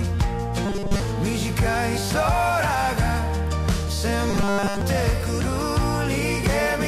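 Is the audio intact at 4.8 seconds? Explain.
No. From 4.30 to 4.81 s the sound becomes robotic, a rigid metallic buzz at 200 Hz, likely from repeated short buffers: a roughly 5 ms slice loops for most of that span. Unlike dropouts, nothing goes silent; a fixed-rate buzz is imposed on the audio.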